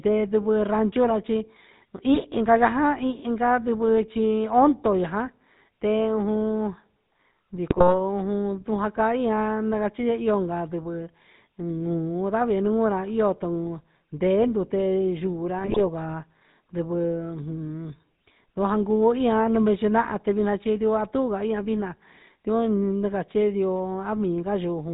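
Speech, heard throughout through the GSM full-rate codec, with a buzzy, gravelly roughness consistent with 13 kbps coding; on a spectrogram everything above 4 kHz is empty. GSM bit errors burst into squawks and gargling at 2.14 to 2.24 s (just before "inca ja inca nidvɨ"), 7.7 to 7.95 s, and 15.58 to 15.81 s (just after "ndute yuura"). Corrupted decoder parameters show as smeared spectral blotches and sudden level spikes in the waveform.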